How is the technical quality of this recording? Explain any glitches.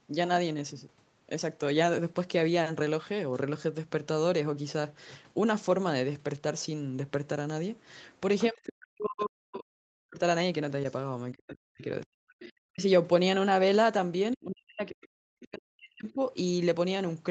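The recording has two recurring call-processing faults, both clustered in the second half.

Other side's voice leaking through, at 8.38–8.70, 11.48–11.54, 12.40–12.52 and 14.32–14.36 s: a faint second voice, about 15 to 35 dB below the talker, likely loudspeaker echo the canceller missed. It is an added voice, not a loss.

Speech suppressed in double talk, at 8.49–10.2, 11.32–12.84 and 14.35–16.21 s: the talker's own voice dips by up to roughly 40 dB while the echo plays, likely from the canceller ducking both. Unlike packet loss, the dips follow the overlap.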